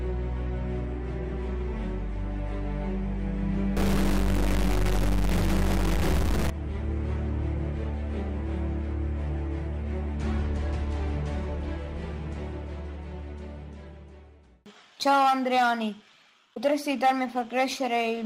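From 3.77 to 6.51 s the audio turns harshly buzzy, with noise filling quiet moments, likely a stuck bit corrupting samples by a fairly large step.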